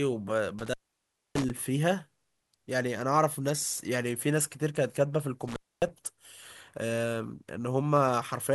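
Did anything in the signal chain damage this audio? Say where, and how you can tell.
Yes, at the analogue wiring stage: there's an intermittent contact. Around 0.59 to 1.50 s the speech drops out for about 0.62 s, then again at 5.48 to 5.89 s for about 0.26 s, with crackle at each break as a loose plug or cable loses and regains connection.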